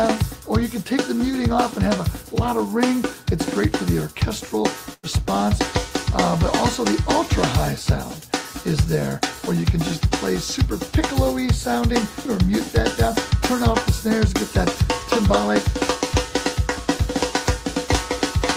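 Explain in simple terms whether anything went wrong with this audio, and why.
Around 4.93 to 5.06 s there is a burst of packet loss: a short run of audio never arrived, so the player stretched the last sound into a fading hiss or buzz for about 0.1 s, then skipped ahead. That filled-in tail, not plain silence, sets it apart from a simple dropout.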